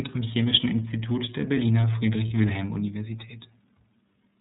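The iLBC codec is present throughout the clip and its damage is plainly audible. The speech is squeezed into a narrowband channel, so nothing above 4 kHz survives, and the sound is dull and boxed-in. Each frame's excitation is coded on its own, with no reliance on the previous frame, which gives the speech a slightly rough, synthetic grain. Together these traits point to iLBC's 30 ms frame mode at about 13.33 kbps.

Lost iLBC frames appear at 2.28 to 2.32 s. The gap lasts about 30 ms, which fits a single dropped frame. To fill it, the decoder repeated the last pitch cycle and mixed in noise. The result is a brief held, slightly buzzy or breathy vowel sound in place of the missing audio. Because iLBC frames stand alone, the next frame decodes cleanly and the speech recovers almost immediately after the concealed stretch.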